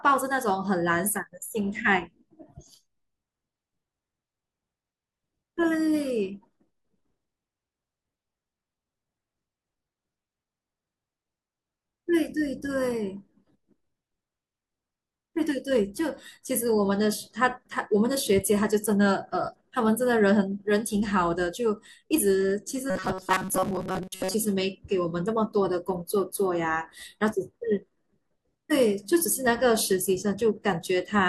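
From 22.90 to 24.34 s the speech takes on a robotic sound, most likely from repeated short buffers: with new audio arriving too slowly, a fragment of about 5.3 ms keeps being replayed while real material is skipped, for most of that stretch. The loop imposes a fixed metallic buzz at 188 Hz. Unlike dropouts, there is no silence, and unlike a pitch shift, the buzz holds steady instead of following the speaker's intonation.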